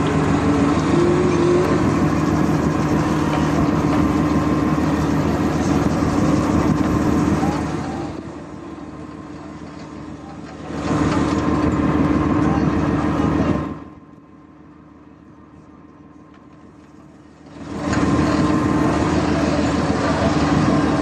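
From 13.51 to 13.98 s, ticking rides on a fall of about 25 dB. This is zipper noise: unsmoothed 3 dB level steps, about twenty a second.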